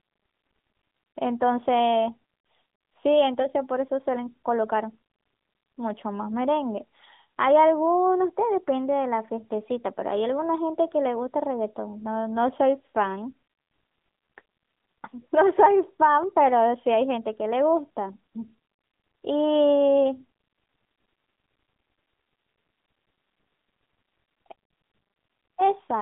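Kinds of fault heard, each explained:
AMR narrowband mobile codec, throughout the clip: the speech has passed through the 2G/3G mobile codec, which samples at 8 kHz and rebuilds the voice from a vocal-tract filter driven by sparse pulses in 20 ms frames. Nothing survives above 3.8 kHz, and the line band runs from 200 Hz to 3.6 kHz, so the voice sounds thin and boxy. The codec damage is plainly audible as a buzzy, synthetic edge, consistent with a mid-range rate around 10.2 kbps.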